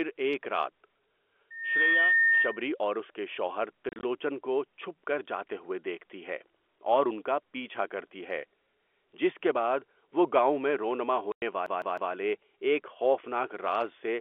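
From 1.50 s to 2.69 s there is loudspeaker feedback squeal. A microphone is hearing the loudspeaker it drives, and at 1.8 kHz the loop gain has gone past unity, so that single tone reinforces itself on every pass. It swells over roughly a third of a second and then holds at about 5 dB above the speech, a steady whistle sitting on top of everything until the loop is broken.

Between 3.89 s and 4.03 s comes packet loss filled with silence. Over that 140 ms stretch, 90 ms of audio drops out in several short holes, the longest 30 ms. Each gap is replaced by dead silence with abrupt edges, so the speech flickers. The hole sizes fit 10 ms packets. A second loss follows at 11.32 to 11.42 s as one solid 100 ms block of silence, cutting the audio off sharply and restoring it just as sharply.

From 11.66 s to 12.13 s the audio behaves like a CD stuck on one turn. The playback keeps jumping back to the same point, replaying a segment of about 0.16 s three times, with a brief mute at each jump. 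It sounds like the rapid, evenly paced stutter of a skipping disc.

The G.711 A-law telephone channel underneath can be heard as a 300 to 3400 Hz band.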